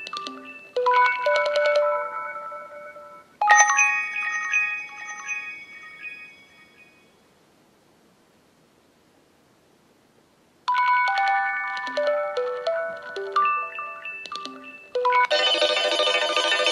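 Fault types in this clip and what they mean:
No technical faults can be heard in this clip. There is nothing to list for any fault type.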